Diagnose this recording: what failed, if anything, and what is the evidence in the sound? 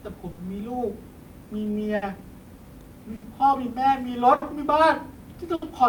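Network stage: clock drift between sender and receiver, with the sender running roughly 5 percent slow, steadily drains the jitter buffer, so timing hiccups recur throughout the speech.

Short stall from a late packet at 0.31, 1.96, 3.16, 4.36 and 5.56 s: each time the empty buffer stretched the last sound by 60 ms, with nothing lost.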